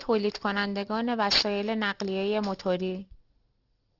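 From start to finish the speech sounds gritty and metallic in its sibilants: aliasing, where content above 6 kHz folded back down when the rate was dropped to 12 kHz without filtering, leaving strong alias energy.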